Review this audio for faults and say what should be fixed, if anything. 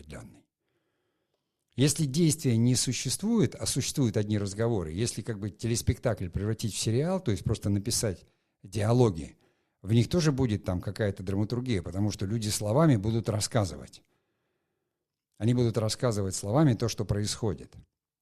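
Nothing needs fixing: the speech signal stays continuous and technically sound throughout, with no problems to report.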